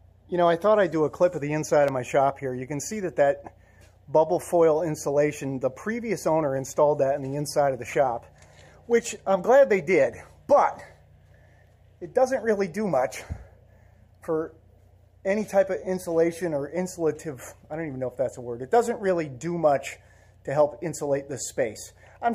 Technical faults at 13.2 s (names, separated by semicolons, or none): block of digital silence